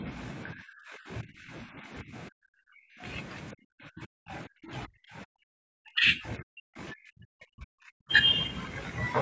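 From 0.00 to 0.08 s the speech dips by about 5 dB. From 0.53 to 3.03 s and from 3.53 to 8.11 s it sinks in ragged pieces by up to about 40 dB. This is speech suppressed in double talk, likely from an echo canceller ducking the talker.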